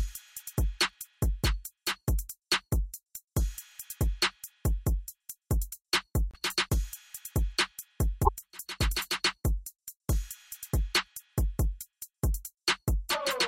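At 6.31 s the audio skips ahead and breaks into a garbled glitch lasting until 6.35 s, and the same thing happens again from 8.24 to 8.29 s. Each disturbance spans under two frames of roughly 26 ms, which fits standard MP3 framing. The likely cause is a broken MP3 bit reservoir: frames were lost, so the next frame reached back for borrowed data and decoded bytes belonging to a different frame.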